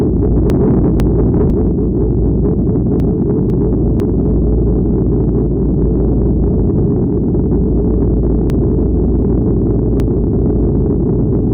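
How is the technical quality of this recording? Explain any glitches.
The recording has three short jumbled passages, caused by chunks out of order. At 0.5 to 1.5 s and again at 3.0 to 4.0 s, two half-second pieces of sound play swapped. From 8.5 to 10.5 s, the first 500 ms piece turns up only after the three that should follow it. No audio is missing, but each misplaced chunk creates three hard joins where unrelated waveforms meet, producing the scrambled feel.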